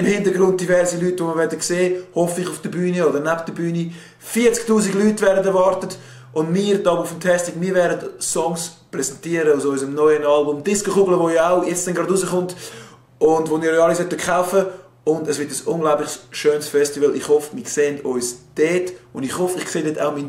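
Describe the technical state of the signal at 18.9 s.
At 18.9 s the signal is intact, with no dropout, clipping, glitch or other fault audible at that point.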